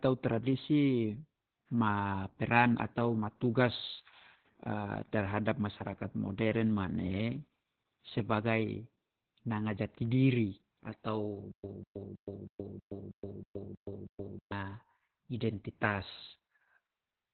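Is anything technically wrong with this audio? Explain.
Yes. There are two faults.

Opus voice compression runs through the whole clip. Nothing is present above about 4.2 kHz. The speech sounds muffled, hoarse and a little robotic. This fits narrowband SILK coding at a very low bitrate, around 8 kbps, where the excitation is coded coarsely.

A stutter with silent gaps occurs from 11.51 to 14.52 s, just after "nanga jati diri atau". A 195 ms fragment repeats nine times, once every 319 ms, with 124 ms of digital silence between repeats. The player or stream likely stalled and replayed its last fragment at each retry. The audio due in that span is lost.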